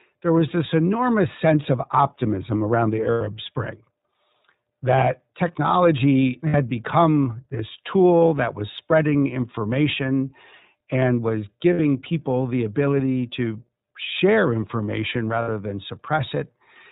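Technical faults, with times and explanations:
Throughout: iLBC codec, plainly audible; narrowband coding with nothing above 4 kHz, giving slightly rough, synthetic speech. The spectrogram shows a hard ceiling at 4 kHz, and the 30 ms frames point to roughly 13.3 kbps.
3.12–3.22 s, 6.47–6.55 s, 11.73–11.80 s, 15.42–15.48 s: lost iLBC frames, 90 ms then 60 ms gaps. The decoder repeats the last pitch cycle with noise, giving a held buzzy vowel. This shows as flat, smeared harmonic bands, and the voice returns almost at once afterwards.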